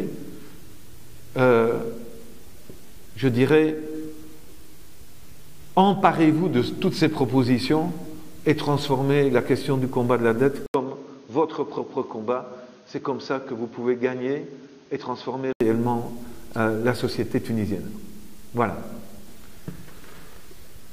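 At 10.66 s the sound cuts out for 80 ms, then returns dull and boxy, about 5 dB quieter, with nothing above 6.6 kHz and a faint new background noise, until 15.6 s. The likely cause is the input switched to a poorer, narrower-band device.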